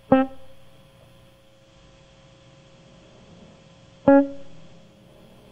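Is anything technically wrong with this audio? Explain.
Yes. From 1.29 s to 5.21 s, this music shows digital radio blending to analogue. The receiver lost its digital stream and faded over about 486 ms to the FM broadcast, so faint hiss appears, while the level stays put.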